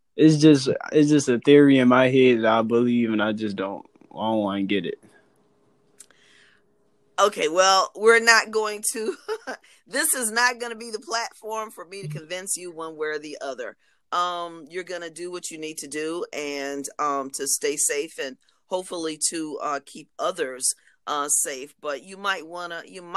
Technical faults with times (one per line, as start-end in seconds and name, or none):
none